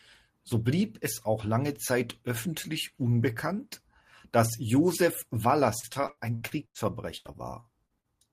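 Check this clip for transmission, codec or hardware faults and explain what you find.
Repeated packet loss (robotic sound) breaks up the speech twice, from 5.79 to 6.77 s and again from 7.17 to 8.06 s. In each stretch, lost audio is patched by stretching the last received sound, so holes of up to 98 ms and 80 ms turn choppy. Concealment covers about a third of the first stretch and a quarter of the second. Unlike a single dropout, the gaps recur in quick succession.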